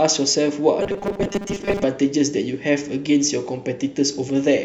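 A speech clip with one fault. From 0.80 s to 1.85 s the voice turns into a rigid, metallic buzz, the robotic sound of repeated short buffers. The buzz sits at a fixed 200 Hz while the speech still loosely tracks the words. The likely cause is audio arriving too seldom, so the playback fills the gaps by looping the last few milliseconds. A 200 Hz buzz fits a loop about 5 ms long. Most of that stretch, roughly 70 percent, is repeated material rather than real audio.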